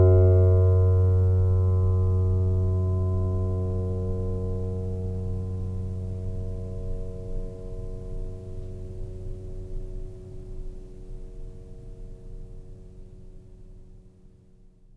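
No technical faults are audible anywhere in the music.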